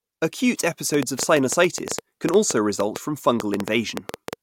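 From 0.94 s to 4.34 s a train of clicks runs across the speech, around thirty sharp pulses arriving at roughly 7.1 per second but with uneven spacing, so the ticking has no steady rhythm. Each click has much the same short, popping shape and sits well above the speech level, so the pulses cut through syllables and pauses alike. The likely source is electrical interference or a faulty connection or power supply.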